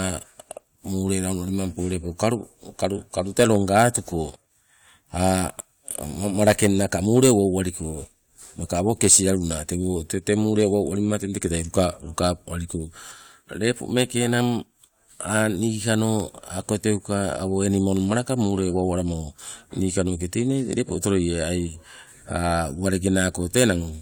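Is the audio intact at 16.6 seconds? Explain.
Yes, the speech at 16.6 seconds is intact, with no audible fault at that moment.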